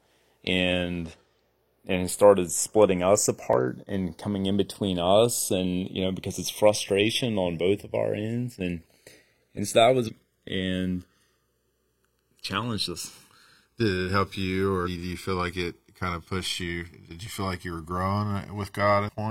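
Speech with two channels drifting apart. The two sides run from clocks that disagree by around 50 ppm, so the inter-channel delay slowly grows to about a millisecond by the end. In mono the resulting comb notches creep through the spectrum as a gradual flanging wash. Damaged data in a compressed stream causes short glitches where the decoder loses frame sync and jumps to the next header. These occur at 3.53 to 3.57 s, between "it started splitting us" and "and coming in between"; at 10.03 to 10.10 s, after "and so that"; at 14.82 to 14.88 s, between "it help you" and "you feel like it"; and at 19.04 to 19.10 s. A block of digital silence at 17.27 s cuts the signal out for 2.67 ms, which fits a 128-sample buffer not being filled in time. At that length it is heard as a tick or dip rather than as silence.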